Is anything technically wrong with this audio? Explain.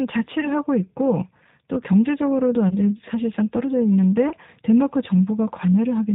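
Yes, two things. The whole speech clip has G.729 codec damage, and there are three short packet-loss dropouts.

The G.729 codec coloring is there from start to finish, and it's plainly audible. The speech sounds rough and a bit synthetic, and it's cut off above 4 kHz. That fits an 8 kbit/s G.729A stream. The codec doesn't keep the waveform. It rebuilds speech from a vocal tract filter, a pitch predictor and a few pulses per 10 ms frame, and that sparse model is what you're hearing.

Then there's VoIP packet loss concealed by the speech codec at 0.41 to 0.48 s, 2.69 to 2.75 s and 4.29 to 4.34 s. Each one sounds like a single lost 20 ms packet. The decoder fills the gap by extending the last pitch and filter while turning the level down, so you get a brief stretched patch of buzzy tone or coloured noise that fades. Because each frame builds on the previous one, the speech stays weak or distorted for tens of milliseconds or more after the stream comes back.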